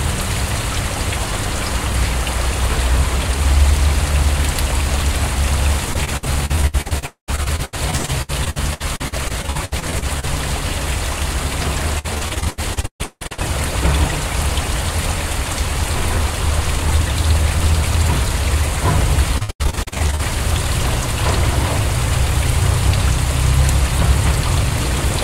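From 5.93 to 10.25 s, repeated packet loss (robotic sound) chops the audio with dozens of short holes, the longest about 79 ms, each patched by stretching the previous sound. It returns from 11.99 to 13.43 s, with gaps up to 171 ms, and from 19.38 to 20.21 s. On a spectrogram these stretches show smeared, repeated slices and abrupt edges. The waveform looks stuttered. In the later stretches about half the time is patched.

At 7.06 to 7.30 s the sound turns into a fading buzz, then about 110 ms of silence before it resumes with a piece missing. This is likely a long network dropout. The waveform shows a decaying tail and then a flat gap.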